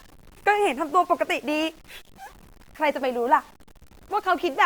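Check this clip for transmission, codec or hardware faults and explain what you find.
There's one fault here, and it runs through the whole speech recording: low bit depth without dither. The sound carries a grainy, gritty distortion that rises and falls with the speech, roughest in the quiet stretches and tails, where low-level detail breaks up or sputters. The likely cause is samples truncated to about 7 bits with no dither, so the rounding error tracks the signal instead of becoming smooth hiss, sitting roughly 30 dB below the speech.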